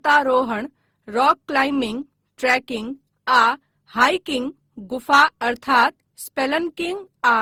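Throughout, the speech sounds swirly, hollow and smeared, with blurred attacks. This is generation loss, likely from about ten passes through Opus at 48 kbit/s.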